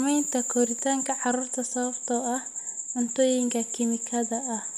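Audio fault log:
No faults heard in this speech recording.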